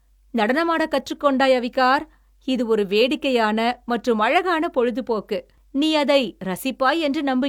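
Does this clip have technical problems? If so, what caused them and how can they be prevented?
No, this clip has no technical problems, so there is nothing to trace to a cause or to prevent.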